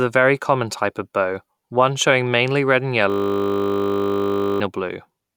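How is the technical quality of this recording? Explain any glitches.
There's one real problem: a system hang loop from 3.1 to 4.6 s, right after "showing mainly red and". The machine stalled while the audio hardware kept replaying the same 20 ms buffer, so the speech turns into a steady 50 Hz buzz, and about a second and a half of audio is lost.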